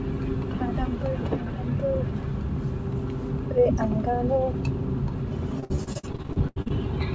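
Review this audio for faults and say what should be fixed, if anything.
Repeated packet loss between 5.60 and 6.72 s leaves many short holes, the longest 80 ms, and patching about 40% of that stretch with continued sound makes it choppy and robotic. A deeper jitter buffer with forward error correction on the network link would keep these dropouts from reaching the listener.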